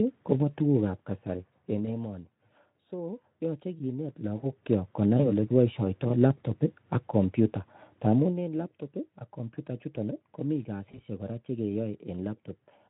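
Speech clip, coded with Speex at light damage, showing VoIP packet loss concealed by the speech codec at 1.85–1.93 s (between "tuguukab kasari eng" and "emoni so yoche kineet"), 5.17–5.31 s (after "so yoche kineet logookyok", before "olekiboishioto labtob ak komyuta"), and 10.91–11.02 s. Each dropout fits a single lost 20 ms frame. The decoder fills it by extending the previous pitch and filter at falling gain, so the sound is stretched into a fading buzzy tone or coloured noise, and the voice stays weak or distorted for tens of milliseconds or more before recovering.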